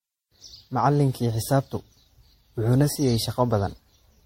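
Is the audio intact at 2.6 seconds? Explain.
No, at 2.6 seconds the speech has the swirly, hollow, smeared quality of generation loss, and it runs through the whole clip. It's likely from repeated MP3 re-encoding, around seven passes at what sounds like 64 kbit/s, each adding fresh quantisation noise. Nothing survives above 16.5 kHz.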